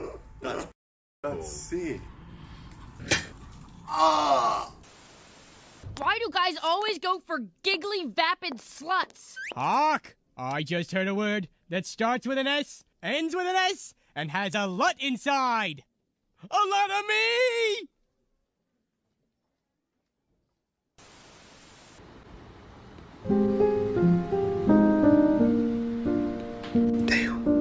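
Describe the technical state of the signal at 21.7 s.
At 21.7 s the signal is intact, with no audible fault at that point.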